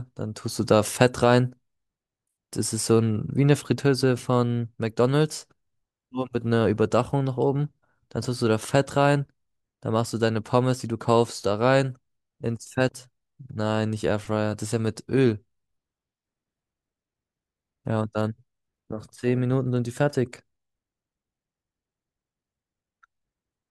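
No technical faults are audible.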